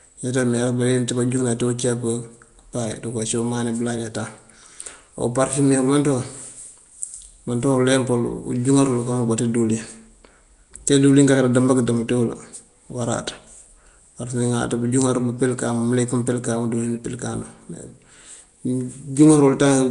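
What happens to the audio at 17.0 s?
At 17.0 s the speech carries the same rough, hissy halo and smeared, underwater quality heard across the whole clip, with nothing above 10.6 kHz. This is likely Nellymoser compression, at a rate consistent with about 44 kbps. The coder spends a fixed two bits per sample on 256-sample blocks, so weak bands get no bits and are filled with noise. That noise-filled hiss sets it apart from MP3-style swirling, which warbles instead of hissing.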